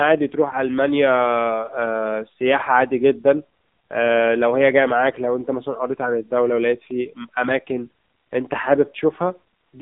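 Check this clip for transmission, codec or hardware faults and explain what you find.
One fault runs through the whole clip: AMR narrowband mobile codec damage. The speech is band-limited to roughly 200 Hz to 3.7 kHz, with nothing above 3.8 kHz. Heavy buzzy, synthetic coloration from pulse-driven vocal-tract modelling points to a low mode near 6.7 kbps.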